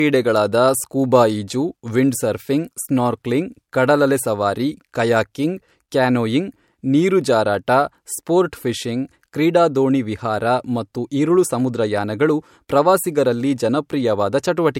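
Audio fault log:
Throughout, low-bitrate audio saved at a high bitrate: the speech keeps the artefacts of an earlier low-bitrate encode, and nothing at all above 16.6 kHz. The likely cause is an earlier MP3 encode at a low bitrate, around 64 kbit/s, later re-saved as a much larger MP3 near 192 kbit/s. The second encode cannot restore the detail or the upper band the first one discarded.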